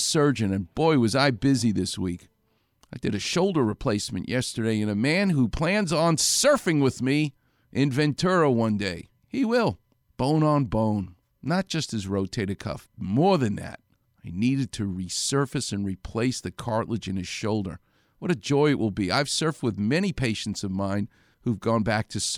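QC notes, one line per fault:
No faults found on review of the speech recording; nothing to log.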